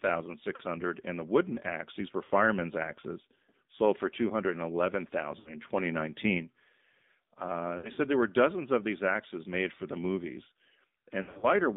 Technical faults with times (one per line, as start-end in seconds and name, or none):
0.00-11.76 AMR narrowband mobile codec
0.56-0.63 lost AMR speech frames
2.24-2.31 lost AMR speech frames
5.40-5.54 lost AMR speech frames
7.78-8.00 lost AMR speech frames
11.22-11.46 lost AMR speech frames